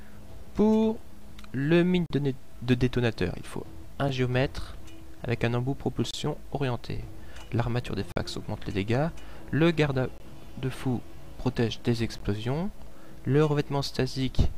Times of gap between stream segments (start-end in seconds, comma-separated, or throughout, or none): 2.06-2.10, 4.09, 6.11-6.14, 8.12-8.16, 10.18-10.20, 12.18-12.20